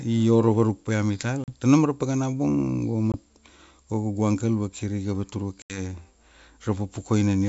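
At 1.44 s after "paia mital", 3.12 s after "paka na bung go", and 5.62 s after "go kaugu angkel vakiriga", packet loss on an ADPCM call leaves hard-edged silent gaps of 40, 20 and 80 ms. The decoder's predictor loses track, so each return sounds briefly unsteady before settling.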